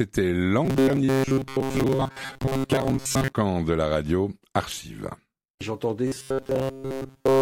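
From 0.65 to 3.36 s the sound turns into a rigid metallic buzz locked at 134 Hz, and most of that stretch is replaced by the drone. It returns at 6.07 s and takes over completely until the clip ends. This robotic sound from repeated short buffers is likely caused by a stalled stream looping a roughly 7.5 ms fragment. Unlike a pitch shift, the buzz keeps one fixed frequency no matter what the underlying audio is doing.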